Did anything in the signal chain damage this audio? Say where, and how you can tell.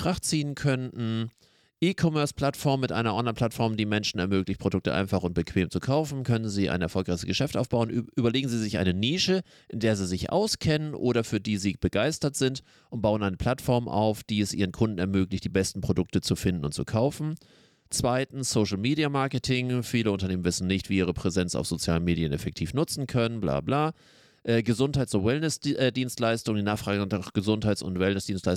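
No, no damage is audible.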